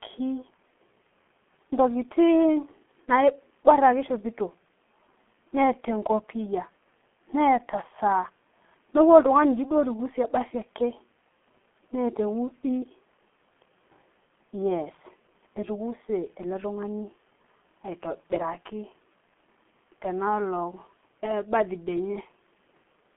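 Throughout the speech, G.723.1 codec damage is heavy: 30 ms frames and a slowly updated voice model, at a rate fitting about 6.3 kbit/s, leave consonants smeared and the tone muffled and hoarse. A spectrogram shows a hard ceiling near 3.8 kHz, energy confined to roughly 200 Hz–3.4 kHz, and blocky, coarse harmonics.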